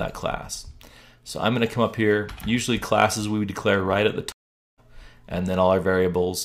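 A stream reconnect breaks this audio: the connection dropped, the player went silent from 4.32 to 4.80 s, about 456 ms, then restarted its decoder mid-stream. The sound fades back in at a later point, skipping roughly 0.4 s of material.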